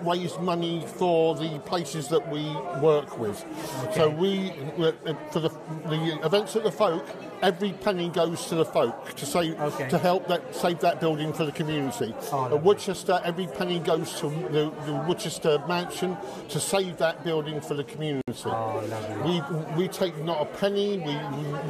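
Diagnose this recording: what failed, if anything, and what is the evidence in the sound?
Gap at a join of encoded pieces at 18.21–18.28 s: a 63 ms silence with smeared edges, left by untrimmed encoder delay and final-frame padding between separately encoded pieces.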